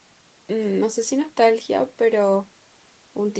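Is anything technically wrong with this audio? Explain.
No, the speech carries the steady coding texture and the ceiling around 8 kHz expected of a call microphone chain and the Opus codec that fits a setting near 32 kbps, with nothing in the signal departing from that normal call-path behaviour.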